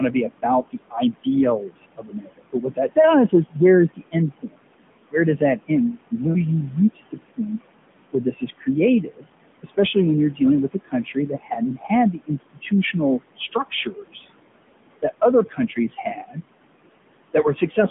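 From the start, the room noise, sitting about 16 dB under the speech, is being held down by a noise suppressor. Its band-by-band gating pulls the background about 21 dB lower between phrases and lets it back up under the talking, leaving a residue that comes and goes with the speech.

On top of that, the whole thing has the boxed-in, buzzy sound of the AMR narrowband mobile codec. Nothing gets through above 3.6 kHz, the band feels like roughly 150 Hz to 3.5 kHz, and the plainly audible synthetic edge fits a mid-rate mode around 10.2 kbps.

The suppressor also eats into the speech itself. Between 0.14 and 4.57 s, about a second's worth of softer sounds and word endings drops by up to about 20 dB and sounds swallowed. It happens again briefly from 5.11 to 6.13 s, just before "do you reach", dipping by up to about 19 dB, and right after "do you reach", from 7.11 to 7.39 s, by up to about 16 dB. 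The longest stretch runs from 8.13 to 14.28 s, with around a second and a half lost, up to about 20 dB down. The last one is from 15.02 to 16.36 s, roughly half a second, up to about 16 dB.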